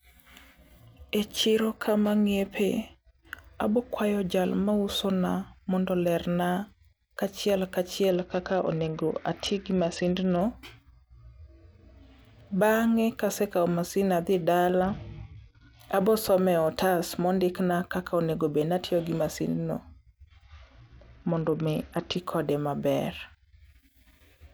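Speech with three Bluetooth SBC bit pool drops, at 8.10 to 10.41 s, 14.82 to 15.79 s (after "kasekao masin adhi", before "abosome otas mondikna kaka") and 20.44 to 22.17 s (before "kode maber"). Treble dulls and gritty quantisation noise rises, consistent with the bit pool falling from 28 to 8, near 72 kbps, which starves the upper sub-bands. Unlike packet-loss dropouts, the audio never stops; it coarsens, then recovers.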